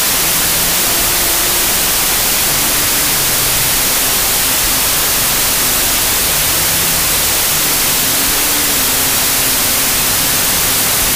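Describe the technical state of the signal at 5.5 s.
Wrong sample width runs through 5.5 s and the whole clip: 32-bit samples read as 16-bit split each value in two, burying the sound in loud noise at half speed, an octave low.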